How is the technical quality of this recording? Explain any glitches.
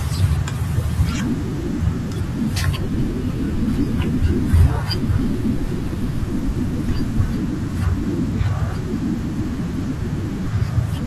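One glitch affects this speech. From 2.22 to 6.22 s, the adaptive stream drops to a lower bitrate after the connection slows. Treble above 15 kHz vanishes. The change is abrupt, with no gap.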